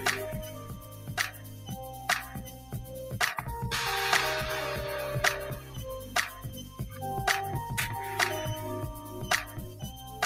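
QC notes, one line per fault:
Throughout, noise suppressor applied to music or sounds: level pumps and thins, swinging by around 15 dB, as a speech-tuned suppressor mistakes steady tones and tails for noise.
0.48–1.72 s, 1.90–2.08 s, 2.27–2.94 s, 5.59–5.79 s, 6.47–7.00 s, 9.49–10.20 s, sound cut by the noise suppressor: sound sinks by up to about 4 to 8 dB as the suppressor classes it as noise.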